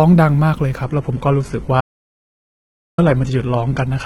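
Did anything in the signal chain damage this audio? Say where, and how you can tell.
Yes. At 0.83 s the network forced an adaptive stream at a lower bitrate, with no gap. The spectrogram empties above 11.8 kHz, which fits low-rate HE-AAC.

An audio dropout to silence spans 1.81 to 2.98 s. The waveform goes flat and silent with no room tone, likely from a lost input link.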